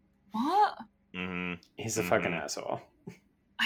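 At 1.2 s the speech is interrupted by a brief blip, the signature of damaged data in a compressed stream. A short stretch of the encoded bitstream is corrupt, so the decoder cannot parse the affected frame correctly, loses synchronisation and scans forward for the next valid frame header. What emerges is a momentary glitch lasting about 10 ms, after which decoding resumes cleanly from the next intact frame.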